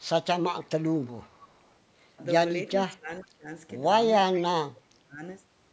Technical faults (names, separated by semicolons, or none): echo leak; speech suppressed in double talk